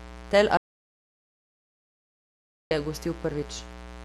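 Mains buzz runs throughout: a steady, raspy 60 Hz buzz, fairly prominent under the speech, from switching spikes whose harmonics climb into several kilohertz. Audio dropout to silence from 0.57 to 2.71 s: about 2.14 s of speech vanishes into silence, likely from the input being lost while recording continued.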